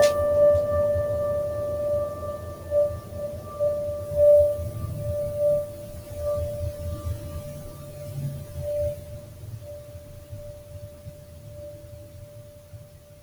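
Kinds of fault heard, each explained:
Noise suppressor applied to music: a speech-oriented noise suppressor stayed active and treated the music's sustained tones, ambience and reverb as noise, so throughout the clip attacks come through while held notes and tails are pulled down by roughly 10 dB, leaving the sound pumping and thinned.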